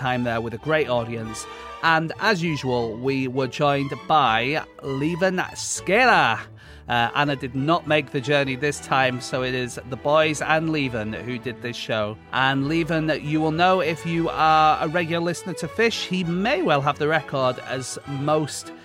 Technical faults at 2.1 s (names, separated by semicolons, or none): none